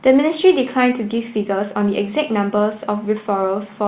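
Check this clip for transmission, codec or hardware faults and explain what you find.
Nothing stood out on listening to this speech, which carries the narrow band of a telephone-grade call path with nothing above 4 kHz.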